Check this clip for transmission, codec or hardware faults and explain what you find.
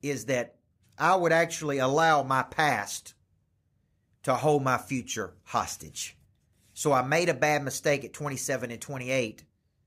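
Nothing wrong turns up here, as the speech comes through with no transmission, codec or hardware trouble to point to anywhere along the way.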